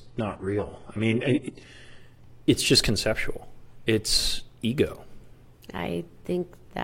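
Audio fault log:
0.0–2.0 s, adaptive stream starting at a low bitrate: the opening two seconds of speech sound dull, with stronger codec artefacts, with nothing above 11.3 kHz and the upper band filled in synthetically, which fits a very low-bitrate HE-AAC version chosen so playback could begin at once. At 2.0 s the player, having gauged the connection, switches to a higher-quality stream, consistent with AAC-LC at around 96 kbit/s. The treble and clarity return abruptly, with no gap or dropout at the changeover.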